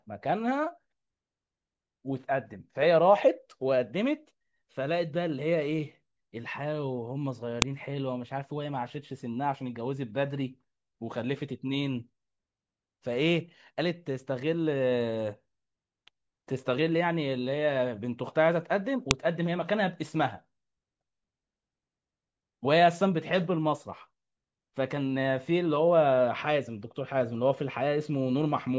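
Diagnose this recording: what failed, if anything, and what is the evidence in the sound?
File header played as audio, a storage or file-joining fault: sharp, loud clicks at 7.62 s and 19.11 s, each a millisecond or two long, independent of the speech around them. Separately recorded WAV segments were concatenated with their headers intact, so those header bytes were decoded as samples.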